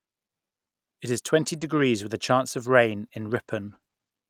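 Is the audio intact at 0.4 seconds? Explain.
Yes, at 0.4 seconds the speech is intact, with no dropout, click, distortion or other fault to be heard at that moment.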